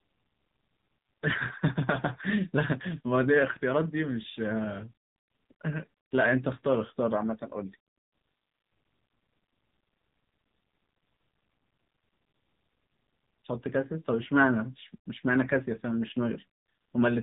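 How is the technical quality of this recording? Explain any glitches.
Technical quality is poor, with heavy mobile-codec damage. AMR narrowband mobile codec, throughout: coarse vocal-tract modelling at what sounds like a low 6.7 kbps mode makes speech buzzy and synthetic, with nothing above 3.8 kHz.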